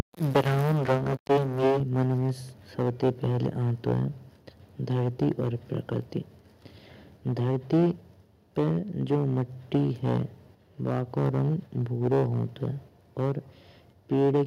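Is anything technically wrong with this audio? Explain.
Yes, the speech is repeatedly clipped, shifted off centre and drops in level once near the start.

Microphone overload, from 0.0 to 4.05 s, then 4.9–6.18 s, 7.27–7.91 s... The peaks are flattened against the converter's ceiling, which likely means the microphone input gain was set too high. In the first span the peaks are pushed about 13 dB past full scale and nearly a third of the samples are cut off, giving a harsh, crackling edge. The later spans are 4.9–6.18 s, 7.27–7.91 s, 8.58–10.23 s, 10.85–13.38 s and 14.11–14.43 s. They run about 4 to 5 dB over, with a smaller share of samples clipped and a lighter but still gritty distortion.

Microphone volume stepped down, at 1.8 s: voice and background fall together by about 5 dB in a single step, in the middle of the heavily clipped opening. This is likely the call software reacting to the overload by lowering the device's input level at once.

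DC offset, throughout: the whole waveform sits displaced from zero by a constant amount. It is inaudible as a tone but eats into headroom on one side, bringing clipping closer. It shows as steady energy at the very bottom of the spectrum.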